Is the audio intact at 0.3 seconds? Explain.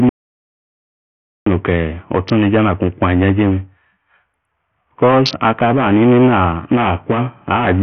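No. At 0.3 seconds the clip is in an audio dropout to silence. It runs from about 0.09 to 1.47 s, roughly 1.37 s in all. The signal stops abruptly and returns just as suddenly. The gap is silent, with no room tone or hiss left in it. That points to lost input while the recorder kept writing silence. A dropped link or disconnected device is the likely cause. Whatever was spoken in that span is gone.

The same moment also sits under Bluetooth SBC compression, which affects the whole clip. The silent gap itself carries none of its sound. The speech on either side has nothing above 6.5 kHz, so the treble is cut away. Heavy codec damage adds a gritty, grainy edge. The likely cause is a low-bitrate SBC link, and the damage fits a rate around 48 kbps. At that rate the upper sub-bands get no bits and the rest are quantised coarsely.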